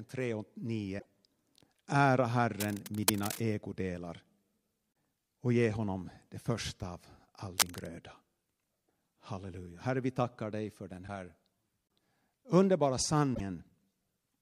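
A speech recording with two kinds of fault. Damaged data in a compressed stream causes brief glitches at 0.96 to 1.06 s, 11.04 to 11.09 s and 13.31 to 13.41 s, as the decoder loses sync on corrupt frames. Cable scratch noise adds rustling bursts at 2.60 to 3.43 s, a little below the speech, and at 7.58 to 7.86 s, about as loud as it, likely from a worn cable or connector being moved.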